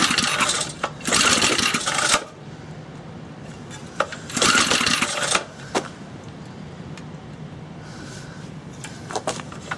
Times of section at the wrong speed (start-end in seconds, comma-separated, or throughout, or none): none